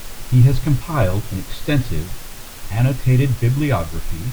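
Speech recording with no technical faults to report.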